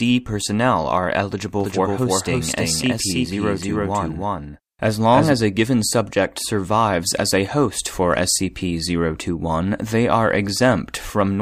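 Speech, and from just after "personnel are" at 1.60 s until 5.32 s, right before "a given subject survives", there's a doubled audio track: a second, equally loud copy trailing by around a third of a second, dry and switching abruptly, likely from a slower capture path recording it twice.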